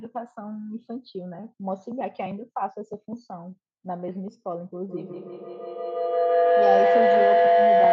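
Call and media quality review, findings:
Feedback howl, 4.85–7.92 s: tone near 700 Hz pulsing about every 150 ms, swelling to about 10 dB over speech. Acoustic loop between co-located devices; repeats grow, unlike echo.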